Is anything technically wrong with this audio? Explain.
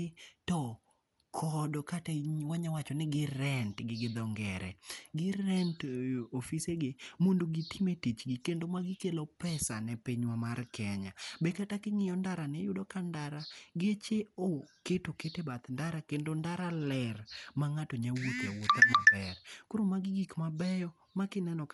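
Yes. Throughout the speech the sound is dull and plainly damaged, with a rough, fluttering noise clinging to voiced tones, and nothing survives above 11.5 kHz. The cause is likely Dolby Digital compression at a low rate, which fits about 64 kbps: the encoder cuts the band and starves many frequency lines of mantissa bits, so the decoder fills them with dither noise. A spectrogram shows a hard ceiling at 11.5 kHz and grainy, blotchy texture around the harmonics.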